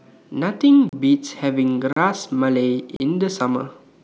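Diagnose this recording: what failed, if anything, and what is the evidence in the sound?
Three hard-edged holes of silence cut into the speech at 0.89 to 0.93 s, 1.93 to 1.96 s and 2.96 to 3.00 s, each about 36 ms, recurring every second: a gap between chunks, likely at the codec or playback stage. The audio arrived in 1-second chunks, and silence, likely from codec padding or a player starting each chunk late, was left at every join.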